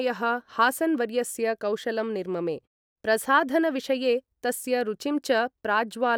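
Nothing in this speech clip points to a technical fault worth flagging.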